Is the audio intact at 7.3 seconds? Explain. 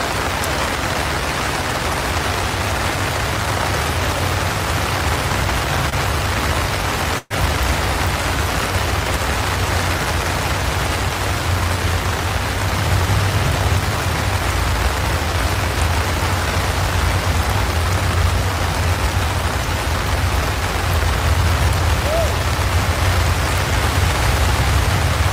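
No. From 7.18 to 7.33 s there is a burst of packet loss: about 120 ms of audio never arrived, so the receiver stretches the last sound into a fading buzz or hiss, then resumes further on. Unlike a plain dropout, the gap is filled rather than silent.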